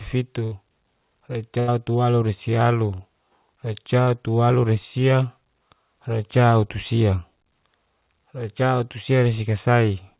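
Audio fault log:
0.44–0.55 s and 1.60–1.71 s, burst of packet loss. About 80 ms of audio fails to arrive each time. The receiver stretches the last sound across the hole for 76 ms and then 79 ms, fading it down as it goes. A voiced sound turns into a flat held buzz, and an unvoiced one into a dimming hiss. The sound then jumps ahead. The missing stretch is never heard.
2.96–3.02 s and 4.03–4.10 s, short concealed packet loss. Each time, about 40 ms of audio is lost. The receiver fills the gap for 40 ms and then 32 ms by continuing the last sound, from its pitch or as shaped noise. It then crossfades back into real audio. The result is a brief smear or wobble. A short consonant there may drop out. The call runs in a narrow telephone band, with nothing above 4 kHz.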